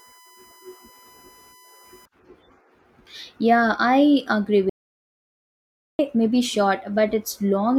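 USB whine runs from the start of the speech to about 2.05 s: a steady, fixed-pitch tone at 1 kHz sitting roughly 30 dB below the voice. It comes from the USB bus drawing current in 1 ms frames, and that periodic load leaks into the audio path through shared power or ground. The frame rate becomes an audible pitch, heard as a thin, constant whine under the speech that stops partway through the clip.

An audio dropout to silence follows from 4.70 s to 5.99 s, cutting the speech off abruptly and bringing it back just as suddenly about 1.29 s later. The gap is silent, with no room tone or hiss, so the input signal itself was lost while recording continued and silence was written in its place. The likely cause is a momentary disconnection or failed link. Whatever was said in that stretch is unrecoverable.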